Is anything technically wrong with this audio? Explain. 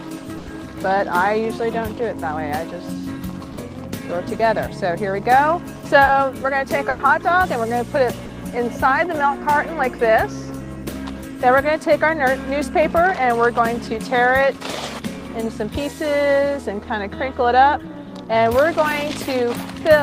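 Yes, the clip has two kinds of network dropout, both concealed by the receiver rather than left silent.

Bursts of packet loss occur at 0.37 to 0.49 s and 6.89 to 7.01 s. In each, about 100 ms of audio failed to arrive in time. The receiver covered the gap by extending the last sound and lowering it as the gap continued, producing either a held buzz or a fading hiss. Playback then resumes 100 ms further on, so that stretch of audio is missing.

Short concealed packet losses occur at 3.53 to 3.59 s, 6.05 to 6.09 s and 8.25 to 8.31 s. The receiver synthesised 40 ms, 20 ms and 40 ms of audio respectively to replace what never reached the decoder, continuing the preceding sound and crossfading back into the real signal. Each is heard as a brief smear or wobble, and a short sound falling in the gap can disappear.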